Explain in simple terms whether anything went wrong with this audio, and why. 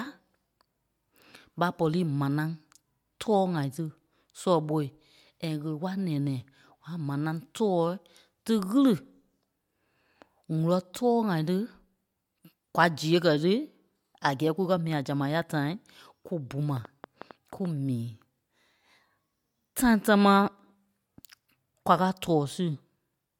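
One thing did go wrong: a train of clicks from 16.77 to 17.66 s. That's a quick burst of about seven similar ticks, roughly 6.8 a second at an uneven pace, popping over the speech. It's likely from electrical interference or a faulty connection or power supply.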